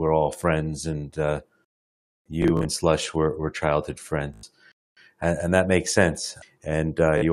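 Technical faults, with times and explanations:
2.42–2.65 s, 4.34–4.43 s (just after "were were childhood") and 7.18–7.22 s, Bluetooth stutter: data arrived late or not at all, so the receiver replayed its last short slice. The first two lose about 93 ms each, fitting five dropped packets. The first is spread over 224 ms, with a longest repeat run of 37 ms. The last loses 37 ms. Each is heard as a brief buzzing repeat.
4.72–4.97 s, gap between chunks: a 250 ms silence sits at a join between stored blocks. This fits 2.5-second chunks with a late start. No sound is lost. The audio simply pauses, then carries on.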